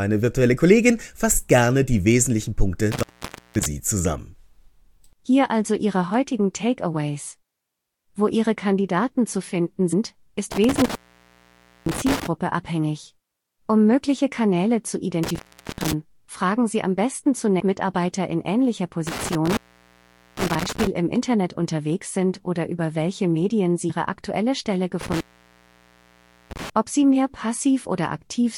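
Speech, with two recurring faults. Intermittent contact cuts the sound out at 2.92–3.66, 10.52–12.27, 15.24–15.93, 19.07–20.87 (after "in ähnlicher") and 25.01–26.70 s. Each dropout lasts between 0.41 and 1.3 s. The openings crackle, leaving faint hiss. A loose plug or cable is opening. Compressed frames skipped cause skips at 9.92 (after "zu finden"), 11.91, 15.46, 17.59 (after "am besten") and 23.89 s. The audio jumps ahead from about a hundredth of a second up to about a fifth of a second. Whole compressed frames were lost or rejected by the decoder.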